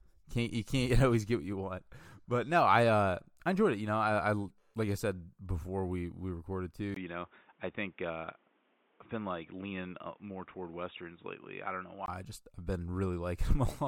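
At 6.94 s, a 20 ms gap, then speech capped at 3.8 kHz with new background noise until 12.08 s: likely an input switched to a poorer device, since filtering adds neither gap nor noise.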